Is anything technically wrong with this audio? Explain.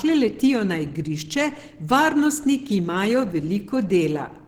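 Yes. Opus compression, throughout: the speech sounds muffled, hoarse and grainy, likely from a low-rate hybrid mode, fitting roughly 16 kbps, that fills starved bands with noise.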